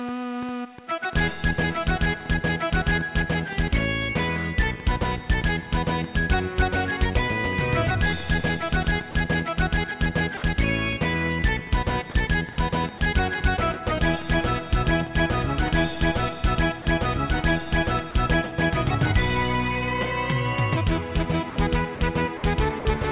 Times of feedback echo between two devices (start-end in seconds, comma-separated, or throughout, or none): none